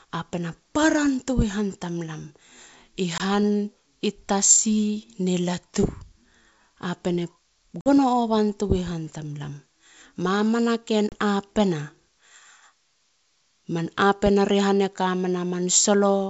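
At 3.18 s (20 ms), 7.81 s (50 ms) and 11.09 s (30 ms), packet loss on an ADPCM call leaves hard-edged silent gaps; the decoder's predictor and step size then mismatch, so the speech resumes briefly clicked, distorted or at the wrong level.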